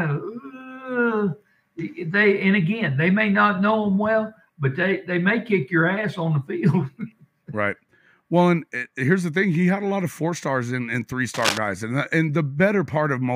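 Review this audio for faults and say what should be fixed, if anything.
From 11.34 to 11.58 s there is a burst of cable scratch noise: a dense, uneven rustling laid over the sound, only a little quieter than the audio itself, roughly 5 dB below it. It is likely a worn cable, connector or control being moved, with the contact resistance jumping about. A digital click or dropout would be a single sharp tick or a gap, not a grainy quarter-second of scratching. Replace or reseat the suspect lead and clean the connector contacts before recording again.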